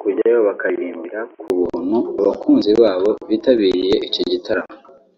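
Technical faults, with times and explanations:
0.0–1.5 s, input switched to a poorer device: the recording likely begins on a lesser input, such as a headset call profile, before changing over to the main microphone. For that first stretch the speech has nothing above 3.2 kHz, so it sounds dull and boxy. It sits about 5 dB quieter, with different background noise roughly 40 dB below the speech. At 1.5 s a 20 ms gap marks the changeover, and the full, brighter sound returns.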